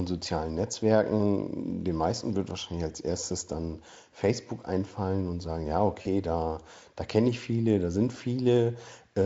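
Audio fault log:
6.01–6.07 s, VoIP packet loss concealed by the speech codec: about 40 ms of audio went missing, which fits two lost 20 ms frames. The decoder covers the hole by repeating its last pitch and spectral shape at falling gain, so the speech smears into a brief buzzy tone or coloured noise that fades, and because each frame builds on the last, the voice stays weak or distorted for a short while after packets return. A plain dropout would leave a silent gap or a click instead. The surrounding Speex coding shows no more than faint damage.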